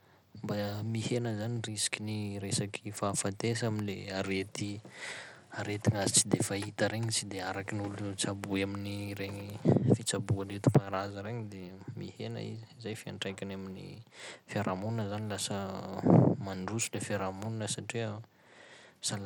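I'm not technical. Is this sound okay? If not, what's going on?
No. Throughout, the speech sounds gritty and grainy, likely from Bluetooth SBC compression, which squeezes sound coarsely into a few frequency bands for wireless sending.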